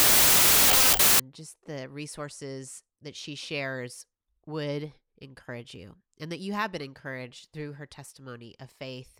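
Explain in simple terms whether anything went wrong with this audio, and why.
Wrong sample width, from 0.0 to 1.2 s, just before "just the resources that". The sound was stored as 16-bit numbers but read back as 24-bit ones, so each sample is assembled from the wrong pieces. Most become random values, heard as loud hiss, with the real speech faint underneath, running 1.5 times too fast and high in pitch, because three stored bytes are consumed where two made one sample.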